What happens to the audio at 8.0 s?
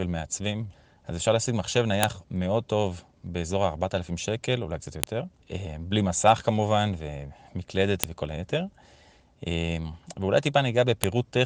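At 8.04 s there's a sharp, loud click cutting through the speech. That's a file header played as audio: the clip was built from separate WAV pieces, about 3 s each, and one piece's header wasn't stripped at the join. Those few dozen bytes of metadata get read as sample values, producing a brief, hard snap that ignores whatever the speech is doing at that instant.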